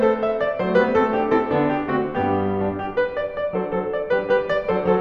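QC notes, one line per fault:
No faults turn up anywhere in this bit of music, so there's nothing to log here.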